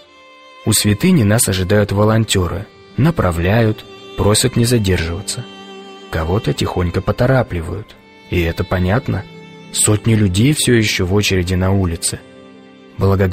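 One channel drops out from 10.54 to 10.59 s: a sudden 50 ms dip of about 6 dB, likely from one stereo side vanishing before the mono sum.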